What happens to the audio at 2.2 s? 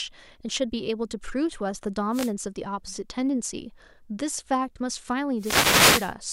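At 2.2 s the speech is hit by a wireless microphone noise hit lasting from 2.11 to 2.32 s, about 0.21 s. The analogue FM radio link from the microphone fades briefly as reflected copies of the signal cancel at the receiver, so the receiver's own noise rises. It is heard as a short swish of static for that fraction of a second.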